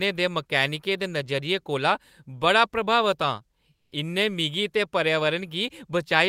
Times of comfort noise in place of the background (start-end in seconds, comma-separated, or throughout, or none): 3.75-3.91